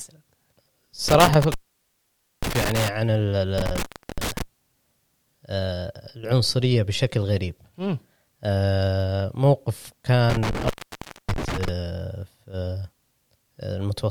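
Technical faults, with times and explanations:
1.08–2.88 s, 3.58–4.42 s and 10.30–11.69 s: intermittent contact. A loose plug or cable momentarily breaks the signal path, so the speech drops out for 0.89 s, 0.36 s and 0.59 s respectively, crackling as the contact scrapes open and closed, with faint hiss filling each gap.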